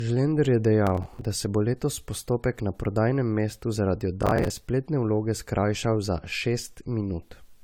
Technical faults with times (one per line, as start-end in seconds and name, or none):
0.00-7.63 generation loss
0.87-1.22 processor overload crackle
4.22-4.50 processor overload crackle